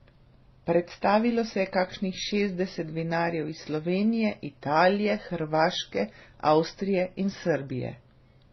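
From start to end, the speech has nothing above about 5.9 kHz and carries several overlapping kinds of coding damage, heard together at once. That mix points to transcoding between lossy codecs, likely a low-rate MP3-style encode followed by low-rate and then moderate-rate AAC-family encodes. Each stage spent bits reproducing the previous stage's artefacts and added its own, while the lowest bandwidth limit in the chain set the dull top end.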